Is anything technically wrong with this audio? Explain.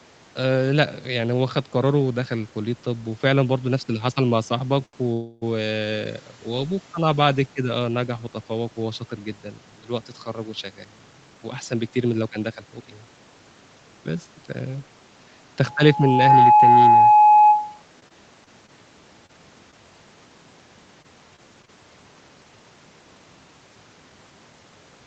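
Yes, the speech has several call-path faults, bunched into a handful of disturbances across the clip.

Short stall from a late packet, 4.86 to 4.95 s: one packet arrived late and the jitter buffer ran dry. The receiver kept extending the last sound for about 75 ms until the data arrived, then carried on from the same point. Nothing is lost, but the sound is briefly held too long and has a faint buzzy smear.

Call audio freeze, 5.13 to 5.44 s: the sound hangs for about 286 ms, continuing the last sound as a fading buzz rather than dropping to silence, then resumes where it stopped. The likely cause is packets held up in transit that emptied the jitter buffer. The wait is added as a gap in the timeline, so little or nothing is missing.

Jitter buffer speed-up, 10.64 to 12.87 s and again 15.85 to 16.30 s: after a backlog built up, the receiver trimmed tiny pitch-period slices over and over to bring the delay back down. 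The first stretch runs at about 112% speed with roughly 300 ms removed, and the second at about 109% with roughly 50 ms removed. Pitch stays the same, but the speech sounds hurried.

Loudspeaker feedback squeal, 15.65 to 17.83 s: a microphone was picking up the loudspeaker it fed, and at 843 Hz the loop gain went above one. That tone swells over roughly 0.7 s into a steady squeal about 10 dB above the speech. It overlaps the second speed-up.

Scattered short gaps, 18.00 to 19.74 s: about seven isolated packets were lost or late. Each hole, the longest around 30 ms, was patched by extending the preceding sound, with about 100 ms missing in total. The result is brief ticks and hiccups in otherwise clear speech.

Repeated packet loss (robotic sound), 21.02 to 21.70 s: four losses came in quick succession, the longest 26 ms, with 80 ms missing and 11% of the span concealed. The back-to-back patching gives the speech a choppy quality with pieces missing.

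Nothing is heard above 8 kHz, which fits an Opus call path at that bandwidth.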